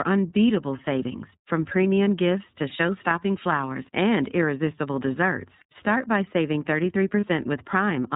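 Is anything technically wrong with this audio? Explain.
Yes. Throughout, the speech carries plainly audible iLBC codec damage. Nothing above 4 kHz survives, and the voice has a rough, slightly synthetic edge, consistent with iLBC's 30 ms mode at about 13.3 kbps. Each frame's excitation is coded independently, trading naturalness for robustness.

There are lost iLBC frames at 2.04, 5.58 and 7.20 s, each a single 30 ms gap. The decoder covers each hole by repeating the last pitch cycle blended with noise, heard as a brief buzzy, held vowel, and the voice then recovers almost immediately.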